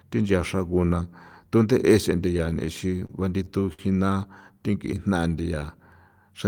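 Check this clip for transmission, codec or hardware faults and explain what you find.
Two transmission faults affect the speech, both from late-arriving network packets.

From 2.37 to 3.81 s there are repeated stalls (stutter): eight short gaps, the longest 52 ms, where the jitter buffer ran dry and the receiver stretched the last sound to fill about 152 ms. Nothing is lost, but delivery halts and jerks. A spectrogram shows brief smeared, frozen patches of harmonics, some fading.

From 4.41 to 5.60 s comes a jitter buffer slow-down. Repeating single pitch periods to rebuild its reserve, the receiver adds about 111 ms, so the speech plays at 91% speed with unchanged pitch and drawn-out sounds. The waveform shows near-identical repeated cycles; spectrogram harmonics stay level but lengthen.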